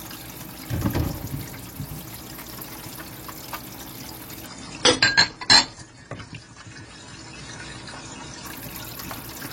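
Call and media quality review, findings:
Adaptive stream at a lower bitrate, 4.46–8.46 s: treble gone above 10 kHz, swirly codec artefacts, fits a switch from about 96 to 24 kbit/s AAC. Abrupt step down and back with no gap, unlike rebuffering or packet-loss dropouts.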